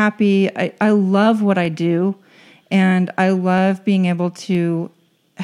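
Clock drift buffer slips run from 0.69 s to 4.55 s: a click recurs every 0.96 s, about five times, through the speech. The likely cause is two devices clocked roughly 200 ppm apart, so the buffer between them drifts until a few samples are dropped or repeated.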